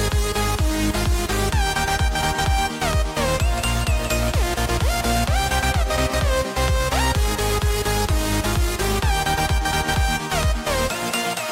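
No technical faults can be heard in this audio.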